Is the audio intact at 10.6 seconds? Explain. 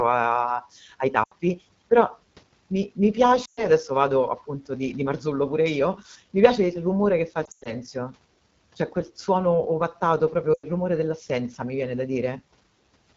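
No. Just after "quel suono ovattato", the speech drops to near silence within two frames from about 10.53 to 10.66 s, then comes back thin and rough before "rumore dell'assenza mi viene". These are lost AMR speech frames. Radio errors corrupted a run of data, about 100 ms, which fits five 20 ms frames. The decoder filled the gap by repeating its last good pitch and vocal tract settings with shrinking gain, so the sound fell away quickly, and it took a moment to regain full strength.

Underneath that, the moment carries the AMR wideband (HD Voice) codec's plainly audible damage: a rough, raspy edge. At 8.85 kbit/s, one of its lowest rates, the pulse-driven vocal tract model has too few bits to describe the speech cleanly up to 6.4 kHz. The band from 6.4 to 7 kHz is only synthesized shaped noise.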